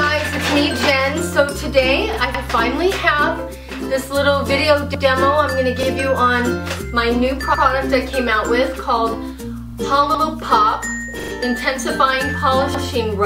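At 2.13 s there's a repeated buffer. A roughly 43 ms piece, which fits a 2048-sample buffer, plays again with a hard join, giving a quick stutter. Overlapping chunks start at 2.35 s. Each 2.5 s chunk begins 100 ms before the last one ends, so that slice plays twice, stuttering at 2.35, 4.95, 7.55, 10.15 and 12.75 s. Meanwhile the buffer repeat comes back at 5.83 s (one extra play), 9.69 s (two) and 11.20 s (three).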